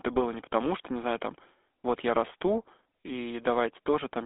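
The clip is speech heard through the GSM full-rate codec from start to finish. The line is limited to roughly 250 Hz to 3.5 kHz, with nothing above 3.8 kHz. The codec rebuilds the voice from a vocal-tract model driven by coarse pulse excitation. This gives a plainly audible buzzy, gravelly roughness, which fits a bitrate of about 13 kbps.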